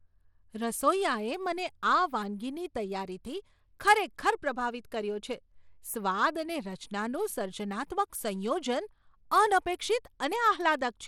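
From start to finish the speech has a thin, flickering treble and a gritty, grainy edge, plainly audible and likely Bluetooth SBC compression at a low bitrate, around 96 kbps, starving the upper sub-bands of bits. A spectrogram shows nothing above 17.3 kHz and patchy, blotchy high bands.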